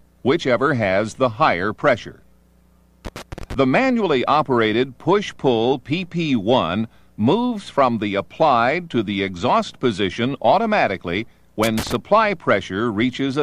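A worn or dirty contact making and breaking intermittently produces loose connector crackle, chopping the signal into irregular scratchy bursts from 3.05 to 3.54 s and again from 11.63 to 11.95 s.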